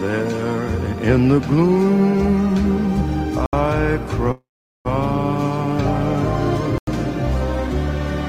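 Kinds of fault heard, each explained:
Block of digital silence: At 3.46 s and 6.78 s the sound drops straight to silence for about 70 ms and 93 ms, the second fitting a 4096-sample buffer. Unlike a freeze, nothing fills the gap.
Call audio freeze: From 4.31 to 4.87 s the last sound is stretched into a fading buzz that ends in about 0.41 s of silence, likely from a jitter buffer running empty. Unlike a dropout, nothing is lost: the sound resumes where it stopped, about 0.54 s late.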